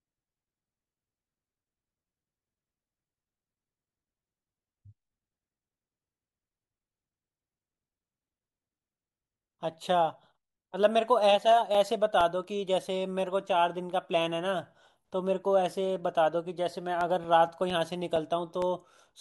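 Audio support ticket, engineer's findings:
CD scratch ticks, 11.52 to 12.44 s: five short clicks over the speech, about five per second, each only a few milliseconds. Probable source: disc surface damage exceeding error correction once per rotation, bad samples interpolated or muted.

CD scratch ticks, 16.78 to 18.62 s: nine clicks, again about five per second, slightly longer, around 5 ms at most. Same once-per-revolution mechanism, likely the same scratch or a second blemish.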